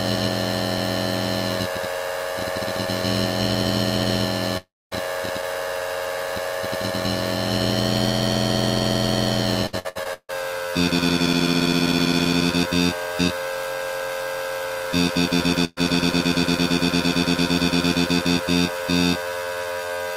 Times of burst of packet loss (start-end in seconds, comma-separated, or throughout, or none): 15.65-15.79